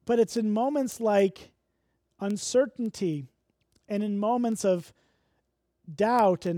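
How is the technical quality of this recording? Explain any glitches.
The recording is marred by one fault. Word clock ticks run from 0.37 s, just after "but it's", to 6.47 s. About twenty sharp ticks of uneven strength recur roughly every third of a second. Each one marks a moment when an unsynchronised receiver's clock slides past the sender's and drops or repeats a single sample, which fits a clock mismatch of roughly 70 ppm. Their steady rhythm separates them from random clicks or dropouts.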